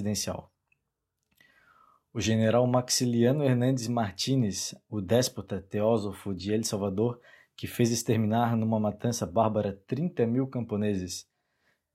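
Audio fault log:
Nothing to log here; this bit of speech comes through without any technical faults I can hear.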